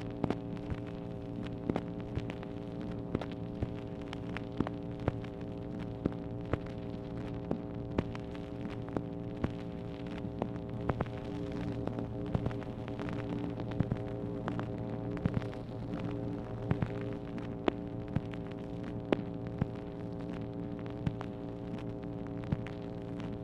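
From 10.74 s to 17.18 s a doubled audio track appears: a second, full-band copy of the sound trails the original by about 100 ms, roughly 5 dB quieter. It is likely that a slower capture path or an edit left two copies out of step. Unlike an echo or room reverb, there is just one repeat, with no decay and no added colour, and it switches on and off abruptly at those two points.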